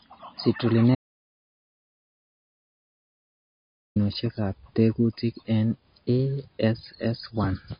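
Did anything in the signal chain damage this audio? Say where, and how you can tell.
Yes, in two places. The whole speech clip sounds like MP3 compression squeezed hard. Nothing comes through above 5 kHz, so the top end is sliced off flat, and the codec damage is plainly audible as that watery, swirly texture on sibilants. That points to the codec stage, likely an MP3 encode at a very low bitrate, somewhere around 26 kbps, where the encoder drops the treble and lets weak frequency lines flicker between frames.

The second problem is an audio dropout to silence from 0.95 s to 3.96 s, so about 3 s of speech just vanishes. It's dead silence with no room tone underneath, and the speech cuts off and comes back mid-flow rather than fading. That's the signature of the input going away at the capture end, likely a lost device or link or a mute, while the recorder kept writing silence. Whatever was said in that gap is gone.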